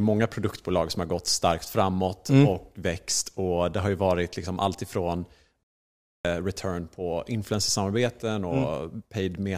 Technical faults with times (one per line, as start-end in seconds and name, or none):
5.63-6.25 playback stall